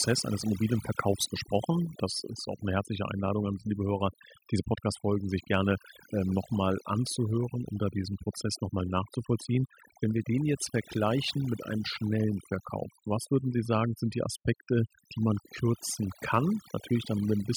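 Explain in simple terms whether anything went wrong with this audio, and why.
Something did go wrong here: overdone noise removal, and it runs through the whole speech clip. A noise reduction tool was pushed too hard. It listens for the background noise and cuts away any slice of sound that resembles it. But the softer parts of the voice resemble it too, so they get cut as well. That leaves the background in the pauses turned down, with sparkly specks.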